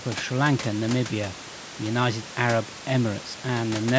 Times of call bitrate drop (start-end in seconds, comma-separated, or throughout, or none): none